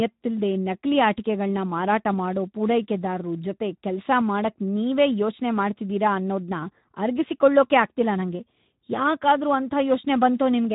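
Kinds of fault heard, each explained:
Speex codec: Speech runs through a low-rate CELP codec throughout, sounding plainly grainy and hoarse, which fits a bitrate near 11 kbps. Nothing remains above 3.8 kHz. Unlike a simple low-pass filter, the texture itself is coarsened, not just dulled.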